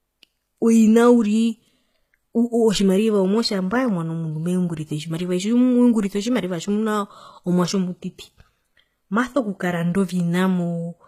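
From start to finish the s sounds come across gritty and lispy, and the treble has a bright but synthetic, metallic sheen, with nothing at all above 14.9 kHz. The damage is plainly audible. The likely cause is HE-AAC compression at a rate that fits roughly 20 kbps: only the lower spectrum is truly coded, and the top octaves are rebuilt by copying lower bands upward, so their harmonics no longer match the original.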